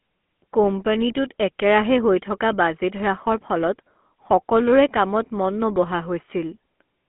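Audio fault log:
Throughout, GSM full-rate codec: the speech has a buzzy, gravelly roughness, squeezed into a narrow telephone band of roughly 200 Hz to 3.4 kHz with nothing above 3.8 kHz. This points to a 13 kbps coder that models the vocal tract and rebuilds its excitation from sparse, regularly spaced pulses.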